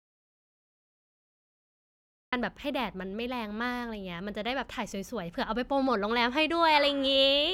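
From the very start until about 2.33 s the clip is an audio dropout to silence: plain silence, with no room tone, hiss or hum underneath. The speech then cuts in abruptly mid-flow, and whatever came before that point is lost. This most likely comes from the input being lost, as with a disconnected device or stray mute, while recording carried on. A noise gate or a quiet lead-in would still leave some faint background or a natural onset rather than dead silence broken by speech already under way.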